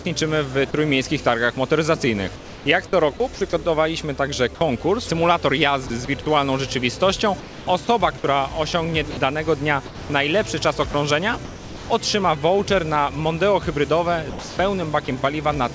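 A voice detector at the sender likely misjudged the signal as background and briefly stopped transmitting: sound dropped by the voice detector at 0.71–0.74 s and 4.55–4.61 s. Each time, about 30 ms and then 60 ms of sound gives way to a short patch of steady comfort noise before the audio resumes.

The same detector, likely misfiring repeatedly, switched on and off within longer stretches. This produced sound chopped by the voice detector at 2.36–3.41 s, 5.87–6.26 s, 7.40–8.24 s, 9.11–10.10 s, 10.91–11.90 s and from 14.30 s to the end. Within these spans, between 90 ms and 480 ms is filled with synthetic noise, so the audio turns choppy.

Throughout, the call path's band limit leaves nothing above 8 kHz, which fits a G.722 codec at 64 kbps.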